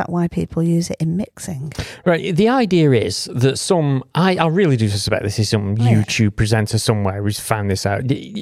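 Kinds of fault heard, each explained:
No faults are audible in this speech recording.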